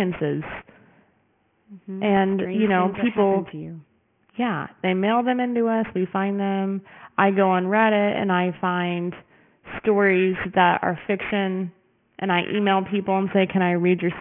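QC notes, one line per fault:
throughout, aliasing: sibilants sound gritty and metallic, with stray tones at unrelated pitches and energy packed against a 3 kHz ceiling. The speech was downsampled unfiltered, consistent with a 6 kHz rate, so content above 3 kHz folds back, roughly 15 dB down.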